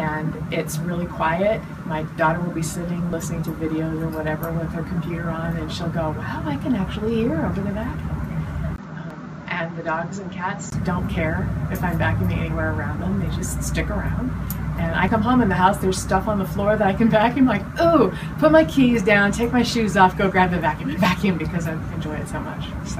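Audio missing between chunks occurs at 3.13, 9.10, 15.08 and 21.05 s. At each point a short piece, roughly 30 ms, drops out and the two sides butt together with no gap. The skips fall almost exactly 6 s apart, which points to a recorder or processor working in 6-second chunks and likely losing a sliver of sound each time it closes one chunk and opens the next. Input switched to a poorer device runs from 8.76 to 10.72 s. It begins with a 20 ms silence at the switch, and the sound then turns duller, with nothing above 7.6 kHz. The level is about 5 dB lower, and a new noise floor sits roughly 30 dB below the signal. This is likely the system changing to a narrower-band microphone or a headset's call profile before switching back.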